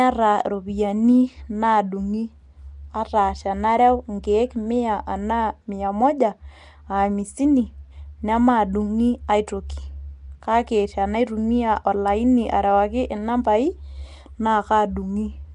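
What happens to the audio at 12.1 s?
At 12.1 s the speech carries the same damage heard from start to finish: a rough, hissy halo and a smeared, underwater quality, with nothing above 10.6 kHz. This is likely Nellymoser compression, which fits about 44 kbps, with starved bands filled by noise.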